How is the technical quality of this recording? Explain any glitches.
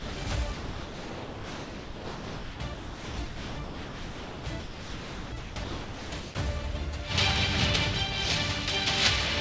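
The quality is uneven: the sound drops in and out twice. From 0 to 0.26 s, and again across a long stretch from 0.54 to 6.34 s, the audio turns choppy as parts vanish under a soft, even noise bed. About 0.18 s is lost in the first span and about 5.12 s in the second. This is likely sound chopped by the voice detector: the sender repeatedly judged the input too quiet to transmit and switched to standardised comfort noise, which stands in for the real signal. Through all of this the call path audibly carries nothing above 8 kHz, which fits a G.722 wideband codec at 64 kbps.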